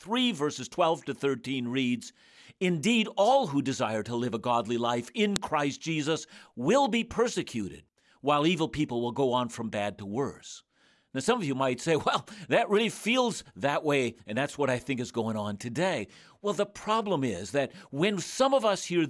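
At 5.36 s a sharp, loud click cuts into the speech: a file header played as audio. A second WAV piece was joined on without its header being stripped, so those few dozen header bytes were played back as samples, producing a brief snap.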